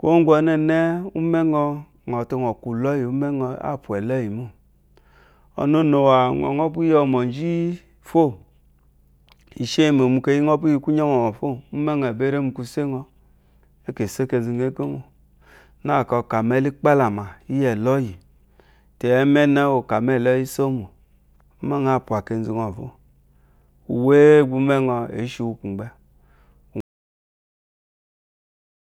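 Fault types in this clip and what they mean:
Audio dropout to silence: at 26.8 s the speech cuts off abruptly mid-flow and the clip stays in total silence until it ends at 28.9 s, roughly two seconds with no room tone or background at all. That dead-flat gap is the mark of the input being lost while recording carried on writing silence, likely a disconnected device, a failed link or an accidental mute, so anything spoken after the cut is simply missing.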